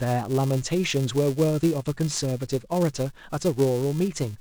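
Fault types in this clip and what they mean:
Filter restarted on every block: a steady, gritty buzz near 375 Hz runs under the speech for the whole clip. It is built from tiny regular ticks that grow louder as the speech gets louder and shrink in quieter stretches. The filter loses its memory at the start of each processing block and starts again from silence, so every block opens with a small transient. The 375 Hz repeat rate fits a 128-sample block.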